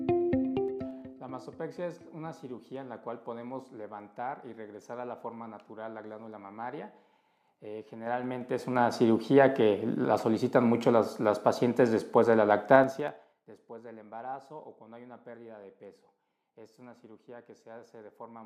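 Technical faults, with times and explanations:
0.51 to 1.15 s, 7.98 to 8.96 s and 12.72 to 13.40 s, zipper noise: ticking zips ride each level change as the level jumps in unsmoothed 3 dB steps, each step clicking.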